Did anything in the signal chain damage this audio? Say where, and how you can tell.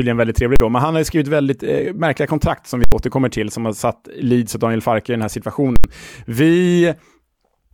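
Yes: invalid numbers at full scale, from the processing stage. Loud bangs hit at 0.56–0.60, 2.84–2.92 and 5.76–5.84 s. Infinite values pinned each 40–80 ms block to one extreme value.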